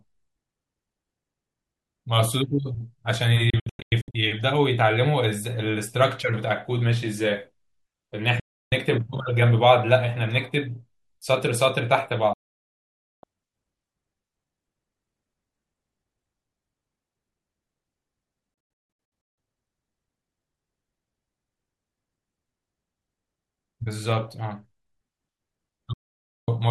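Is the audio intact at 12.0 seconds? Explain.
No. From 11.98 to 12.00 s a single loud pop cuts sharply across the speech, peaking roughly 5 dB above the surrounding level, while the talking carries on underneath it. The cause is likely a brief voltage step or pulse, from a plug, a switch, static or a driver glitch, entering the signal chain. The downstream circuitry shaped that pulse into the short, hard thump heard here.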